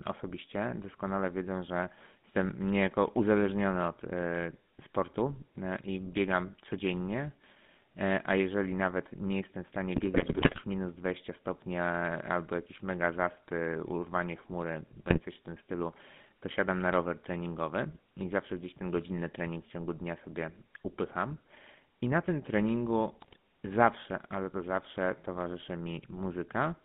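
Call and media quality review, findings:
GSM full-rate codec, whole clip. Buzzy, gravelly roughness on all speech, plainly audible. Band limited to about 150 Hz to 3.6 kHz, nothing above. Sound fits the 13 kbps full-rate codec. Mechanism: vocal-tract filter driven by a regular pulse excitation that keeps only every third sample, so fine detail is replaced by a coarse, rasping buzz.

GSM bit errors, three bursts. 9.96 to 10.61 s: longest, sustained gargling and squawks. 15.10 to 15.19 s: brief break-up. 23.21 to 23.36 s: short break-up. Probable component: speech decoder fed corrupted frames from a weak radio link, with an error rate of a few percent. Mechanism: flipped filter, pitch or gain values distort the spectrum or spike the level frame by frame.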